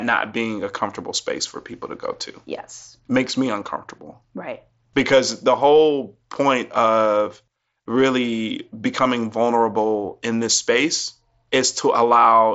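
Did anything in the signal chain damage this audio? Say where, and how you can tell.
No, no stage damaged it.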